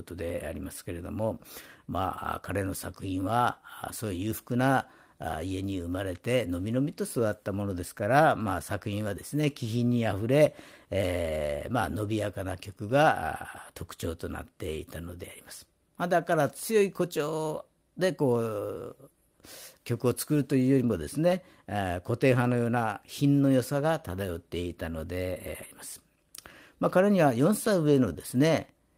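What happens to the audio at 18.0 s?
Nothing goes wrong at 18.0 s: the speech carries on intact through that moment, with no dropout, click, glitch or other break in the signal.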